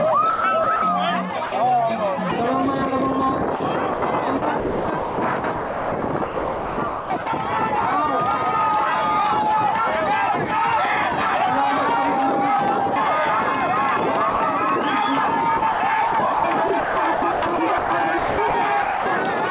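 From 0.3 to 0.82 s the sound is chopped by the voice detector, likely because the sender's detector switched transmission on and off several times. About 220 ms of quiet detail is replaced by comfort noise, so the sound stutters. The same chopping returns over longer stretches, with about 1.88 s replaced between 3.56 and 7.26 s and about 1.26 s replaced between 15.58 and 19.06 s. The repeated switching within each stretch is what sets these apart from a single dropout.

At 1.46 to 1.52 s, and again at 14.3 to 14.4 s, the sound is dropped by the voice detector, likely because it took a quiet passage for background and stopped sending. The sound gives way to one smooth patch of steady noise, 60 ms and then 100 ms long, and resumes once transmission restarts. It is a single clean gap, with no flicker. Throughout the clip the G.711 A-law call path leaves nothing above 4 kHz.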